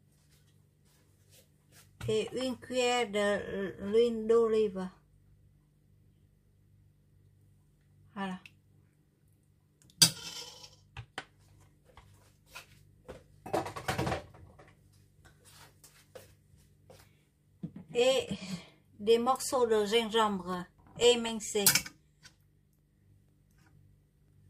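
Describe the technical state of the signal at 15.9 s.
At 15.9 s the signal is intact, with no dropout, distortion, glitch or other audible fault.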